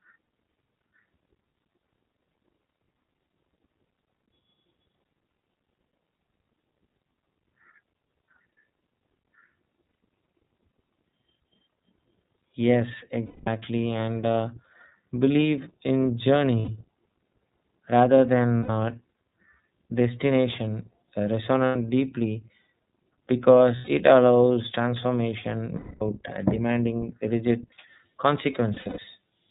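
Throughout, the speech has the narrowband character of the iLBC codec: nothing above 4 kHz, and a plainly audible rough, synthetic edge. Each 30 ms frame's excitation is coded on its own, which fits iLBC's 13.33 kbps mode.

Lost iLBC frames occur at 9.86, 13.25, 16.59, 18.57, 21.67, 23.76, 25.76 and 28.74 s. In each gap the decoder repeats the last pitch cycle mixed with noise, so the sound turns into a held, slightly buzzy vowel. The gaps last 90 to 240 ms, in steps that fit whole 30 ms frames. The last one is broken up over about 240 ms, with no run longer than roughly a tenth of a second. After each gap the speech recovers almost at once.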